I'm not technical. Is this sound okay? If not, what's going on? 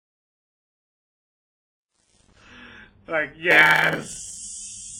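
No, there are three problems in this speech clip.

Throughout, the sound has a watery, smeary quality with a hiss that swells and shrinks along with the speech. That's most likely WMA compression, squeezed hard. The encoder spreads its errors over short stretches of time and throws away quiet detail, which gives that ringing, washy feel.

The opening has truncation distortion on a fade. The clip fades in from the start to about 2.54 s, but the volume change was done with too little precision. While the level is low, the sound turns grainy, and it's at its worst from the start to about 2.31 s. Very quiet parts of the waveform get forced onto a few coarse steps, so they sound gritty.

From about 3.5 to 4.38 s there's a block size mismatch (padded). One part of the system hands over chunks of audio that are too small, and the gaps get filled with tiny silences. That produces a steady 100 Hz buzz, and the speech runs about 8% slow while keeping its general tone.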